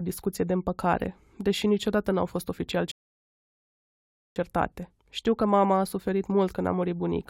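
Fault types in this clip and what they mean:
Rebuffering stall: playback ran dry after "fost oficial" and fell silent from 2.91 to 4.36 s, then resumed exactly there, adding about 1.4 s.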